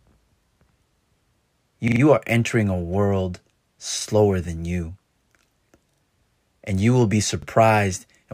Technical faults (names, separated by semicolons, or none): repeated buffer